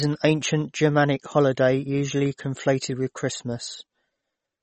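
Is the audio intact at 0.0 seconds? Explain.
No. MP3 compression is present from 0.0 s and runs through the whole speech clip. Nothing is left above about 8.3 kHz, and the damage is plainly audible, which points to a low bitrate near 32 kbps. The likely cause is an encoder short of bits, cutting the treble at a fixed frequency and zeroing weak frequency lines that flicker on and off between frames. The result sounds dull, watery and swirly, with metallic chirps on s sounds and smeared attacks.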